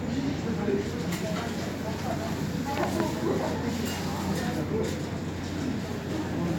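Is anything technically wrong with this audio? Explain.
No, nothing in this recording stood out as a technical problem on listening.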